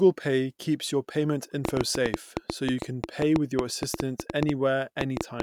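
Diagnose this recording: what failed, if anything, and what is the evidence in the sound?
A train of clicks runs from 1.65 s to 5.41 s, starting just after "pay keeps your payment": some thirty similar pulses at an uneven 6.7 per second, standing well above the speech and audible in pauses. Likely cause: electrical interference coupling into the analogue wiring.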